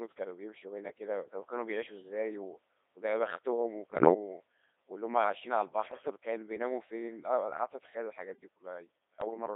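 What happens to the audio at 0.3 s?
Codec 2 vocoder coding is present at 0.3 s, as it is across the whole clip. The speech has been reduced to pitch, voicing, energy and a coarse spectral envelope, then rebuilt from sine waves, so the original waveform is gone. The heavy damage sounds robotic and buzzy, consistent with a rate of about 2.4 kbit/s, and the band is narrowed to roughly 300 Hz to 3.7 kHz, like a radio line.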